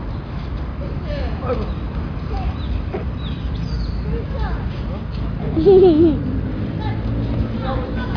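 Nothing here trips up the ear: the sound carries on without a hitch, with no technical faults to point to anywhere along the way.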